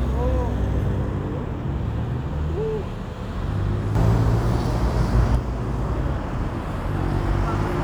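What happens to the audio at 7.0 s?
Nothing goes wrong at 7.0 s; the everyday sound there plays on intact, without any dropout, click or other break.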